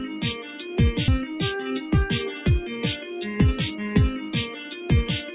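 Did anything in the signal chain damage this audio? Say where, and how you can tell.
Yes. The call processing stage ran a noise suppressor applied to music or sounds across the whole clip. It treats sustained material and ambience as noise, so held parts and decay tails sink while onsets pass, a level swing of around 10 dB that pumps and thins the sound. Codec band-limiting is different: it is steady, and the 4 kHz ceiling of the G.711 A-law path stays fixed rather than breathing with the signal like this.

At 1.08 s there is a skip ahead at the jitter buffer or network stage. Roughly a third of a second of audio is simply gone, and the two sides are butted together with no fill and no silence. The timeline jumps forward. A dropout would leave a hole or a concealment smear, and a clock slip would only lose a sample or two.

From 1.19 to 2.27 s the jitter buffer speed-up is at work. After the backlog, the receiver trims short pitch-period-sized pieces repeatedly to pull its delay back down, about 70 ms in total. 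The sound runs at roughly 107% speed without any pitch rise, and that is the tell. A sample-rate mismatch would shift pitch along with speed, whereas this only compresses time.

Between 4.51 and 4.76 s there is a sound cut by the noise suppressor, again in call processing. This one sound drops by about 6 dB more than its surroundings, with around 300 ms affected. A gain or AGC step would move everything together. Here the suppressor singles out the lingering, steady portion while any sharp onset survives.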